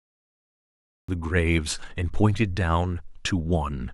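The capture or stream began late, so this cut-off start leaves digital silence from 0.0 s until 1.09 s, where the speech appears abruptly mid-sound. With no natural attack or fade-in, the opening lands as a hard, truncated entry.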